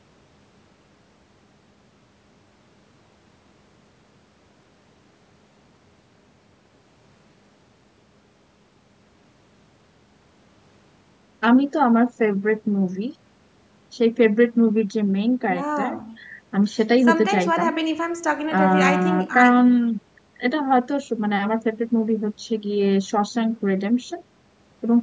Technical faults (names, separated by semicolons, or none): none